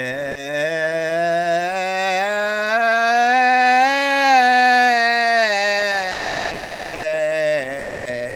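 At 6.13 s the music gives way to steady, flat noise for about 0.9 s, returning at 7.03 s; the same dropout recurs from 7.81 to 8.05 s and again from 8.29 s to the end. These are most likely sound dropped by the voice detector: the sender's detector, as in Opus DTX, judged the music to be background and stopped transmitting, so the receiver filled each gap with comfort noise until the detector triggered again.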